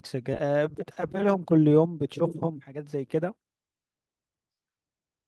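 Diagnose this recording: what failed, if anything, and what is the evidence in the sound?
At about 0.33 s there's a skip ahead: the speech jumps forward with no gap or fill, and the two sides butt straight together. Roughly a second of audio is simply gone. That's the network or jitter buffer stage: a chunk was lost in transit or thrown out when the buffer overflowed, while later packets were already sitting there ready to play. Overall delay drops by about the same second.

Right after, from 0.43 s to 4.99 s, you get a jitter buffer speed-up. The speech runs at about 112% of normal pace but the pitch doesn't move, so it just sounds rushed rather than chipmunky. The receiver had more audio queued than its target, probably after delayed packets landed in a bunch, and it trimmed tiny pitch-period slices over and over to catch up, taking out around half a second in total.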